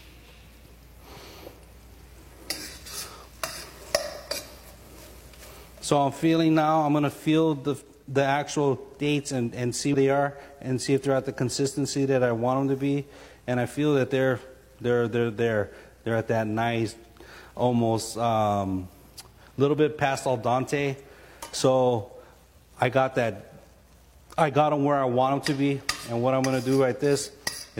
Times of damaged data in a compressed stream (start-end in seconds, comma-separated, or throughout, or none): 9.89-9.95